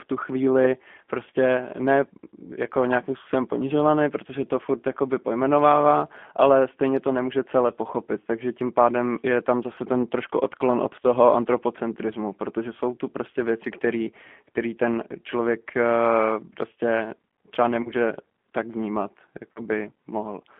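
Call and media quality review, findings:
G.729 codec, throughout: band-limited to 200 Hz–3.4 kHz, plainly rough, synthetic speech texture, consistent with G.729A at 8 kbit/s. Speech rebuilt per 10 ms frame from vocal tract filter, pitch predictor and sparse pulses, so fine detail discarded.

VoIP packet loss concealed by the speech codec, 17.83–17.93 s (20 ms missing, fits one packet) and 19.52–19.60 s (40 ms, fits two packets): decoder extrapolates last pitch and filter at falling gain. Short buzzy tone or coloured noise that fades, then weakened speech until frames rebuild.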